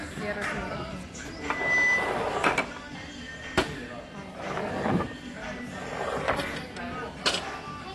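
All the way through, these everyday sounds come across dull and smeared, with nothing above 12.1 kHz and a fizzy, warbly edge. That's likely AAC compression, and the damage is plain enough to suggest a low bitrate, something like 32 kbps, squeezing the spectrum. From 1.35 s to 2.40 s there's a loudspeaker feedback squeal, where the mic catches its own speaker and the loop runs away at 2 kHz. The tone swells over roughly 0.4 s until it sits about 10 dB above everything else.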